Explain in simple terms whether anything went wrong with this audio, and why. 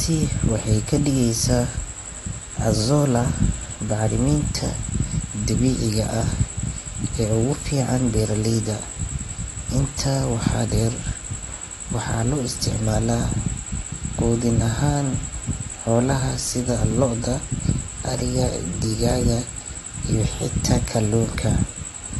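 The speech sounds dull and smeared throughout, with nothing above 11.8 kHz and a fizzy texture on hissy sounds, likely from heavy AAC compression.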